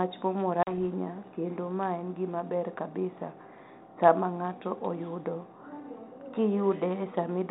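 Packet loss on an ADPCM call hits this speech recording at 0.63 s: a few packets, about 40 ms of audio, never arrive and are filled with silence. The decoder's adaptive predictor and step size then drift out of step with the sender's, so after the hard-edged dropout the speech re-enters slightly distorted before it settles by about 0.73 s. The link carries G.726 ADPCM at 32 kbit/s, heard only as light codec roughness within the telephone band.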